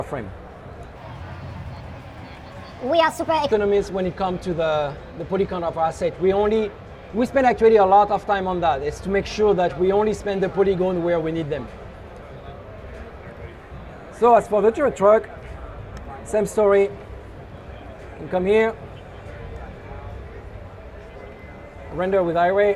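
A wrong sample rate from 0.96 to 3.52 s, consistent with 32 kHz material played at 44.1 kHz, makes the sound run 1.38 times fast and about 5.5 semitones high.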